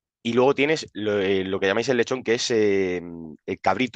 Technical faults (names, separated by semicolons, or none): none